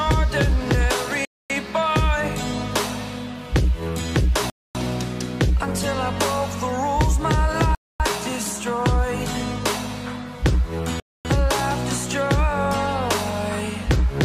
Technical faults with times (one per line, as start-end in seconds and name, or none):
1.25-1.50 gap between chunks
4.50-4.75 gap between chunks
7.75-8.00 gap between chunks
11.00-11.25 gap between chunks